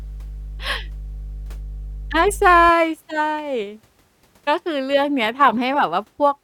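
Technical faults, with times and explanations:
0.00–2.69 s, mains hum: a steady 50 Hz drone, roughly 15 dB below the speech, from power-line current leaking in through a ground loop or nearby transformer. On a spectrogram it is a thin, unbroken horizontal line at 50 Hz that stops at 2.69 s.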